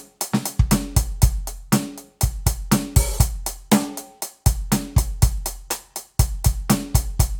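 The clip is a piece of music, and nothing in it stands out as a technical fault. No dropout, glitch, distortion or other defect can be heard anywhere in it.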